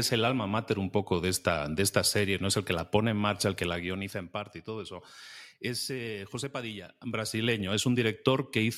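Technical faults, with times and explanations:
3.59–4.27 s and 6.87–7.64 s, zipper noise: the level drops by roughly 10 dB after "pone en marcha el" and before "parte y todo eso", then rises by a similar amount later. Each move is made in 2 dB jumps at around seven a second with no smoothing. Every jump leaves a small click, so a ticking rides on the speech while the level moves. A smooth fade would change the level without any ticks.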